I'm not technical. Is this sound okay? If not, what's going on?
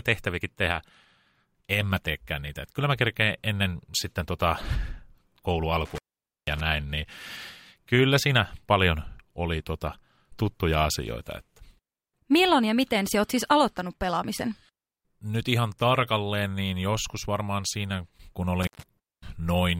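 No, there's an intermittent contact: a loose cable or plug briefly disconnects, so the speech drops out with a crackle, around 5.85 to 6.60 s and again right after "joskus varmaan siinä kun" at 18.63 to 18.83 s.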